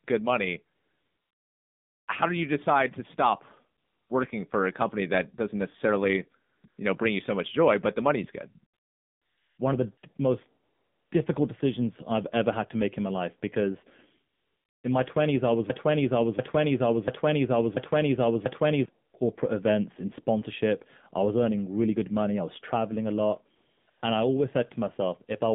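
Throughout, the AMR narrowband mobile codec at 7.4 kbps squeezes speech into roughly 150 Hz to 3.6 kHz, so the sound is plainly buzzy, thin and synthetic.

From 0.76 s to 24.02 s, AMR comfort noise appears eleven times, each time the phone judges the talker silent and stops sending speech frames. The pauses are filled with smooth synthetic hiss lasting from 20 ms up to 1.32 s. The longest falls at 0.76 to 2.08 s. Two brief ones sit near 6.5 to 6.8 s, between "company that doesn't necessarily" and "you know bring you".

From 15.70 to 18.85 s, a broken-record loop, likely from a stalled stream resending its last fragment, repeats a 0.69 s piece five times back to back after "I was". The audio that belonged there is lost before "corporate events in sponsorship".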